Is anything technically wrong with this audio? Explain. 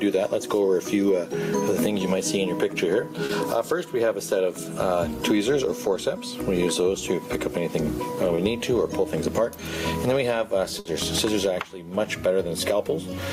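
Yes, there are three kinds of fault.

Gain pumping runs through the whole clip: the level rises and falls by around 20 dB as louder moments come and go, so the dynamics sound squashed. The likely cause is input gain set far too high with a fast limiter or compressor pulling it down on each loud sound. Unlike the dropouts below, this is a continuous breathing of level, not a momentary gap.

Short concealed packet loss occurs at 3.25 to 3.31 s and 8.35 to 8.39 s. A few hundredths of a second of the stream arrived too late for the decoder, so the receiver extended the preceding sound to cover the hole, 40 ms in the first case and 20 ms in the second. It then blended back into real audio. The result is a brief smear or wobble, shorter than the burst described next, and a brief sound may drop out.

A burst of packet loss hits at 10.79 to 10.87 s. A gap of 60 ms had to be filled, three times the later short event. 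The receiver carried the last sound forward while turning it down, so what you hear is a held buzz or a fading hiss. Playback then resumes with 60 ms of the original missing. That audible fade and the jump in the audio set it apart from the quicker smears.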